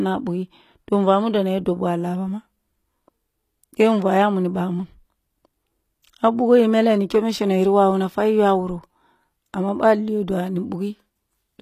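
Throughout, the speech likely went through low-bitrate HE-AAC compression, fitting about 24 kbps: nothing remains above 14.9 kHz, and replicated treble turns s sounds gritty.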